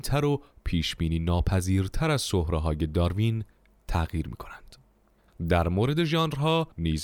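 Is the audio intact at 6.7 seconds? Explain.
Yes, the audio is intact at 6.7 seconds, with no fault audible at that moment.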